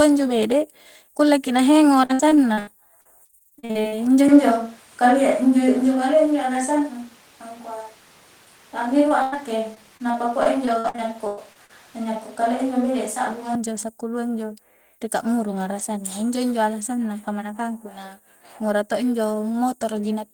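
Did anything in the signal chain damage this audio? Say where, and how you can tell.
Yes. Repeated packet loss (robotic sound) in the network stage, 2.05 to 4.01 s and 9.75 to 11.71 s: choppy audio with pieces missing. A spectrogram shows repeated smeared, stretched frames, with gaps up to about 0.1 s.

From 4.29 to 13.55 s the sound turns abruptly roomy and hollow at about the same level, likely a switch to a distant microphone. The spectrogram shows thinner lows.

Short concealed packet loss, 9.09 to 9.12 s: a brief smear where about 13 ms was patched by the decoder. On a spectrogram it appears as a tiny blurred band.

Burst of packet loss, 9.22 to 9.34 s: about 100 ms is gone, replaced by a fading continuation of the last sound. The waveform tapers down, then jumps to later audio.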